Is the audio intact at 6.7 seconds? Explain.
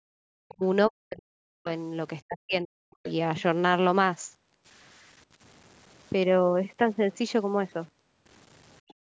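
No. At 6.7 seconds, as through the whole clip, the speech carries grainy distortion that tracks the signal and sits only about 30 dB below it. This is likely low bit depth without dither: samples truncated to something like 8 bits, so the rounding error follows the speech. Quiet stretches turn gritty or sputter. The waveform shows visible stair-steps at low levels, and the spectrogram shows a signal-dependent noise haze filling the band up to the call's 8 kHz ceiling.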